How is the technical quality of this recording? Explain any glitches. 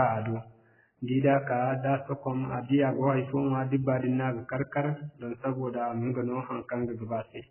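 The quality is poor throughout because of heavy AAC compression. The speech has nothing above 3 kHz, and the remaining sound is dull, smeared and warbling, which fits AAC-LC at a very low bitrate of around 8 kbps, the likely cause. Unlike a plain low-pass filter, the coarse quantisation leaves fizzy, watery artefacts.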